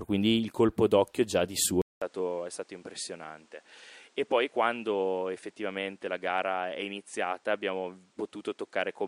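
Input switched to a poorer device at 1.82 s, lasting to the end. After a 200 ms gap the speech returns roughly 10 dB quieter and duller, cut off above 10.5 kHz, with new background noise roughly 35 dB below the speech, likely because recording moved to a narrower-band microphone.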